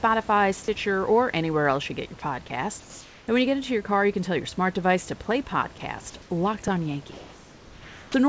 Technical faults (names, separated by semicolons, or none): comfort noise in place of the background; onset clipped by the voice detector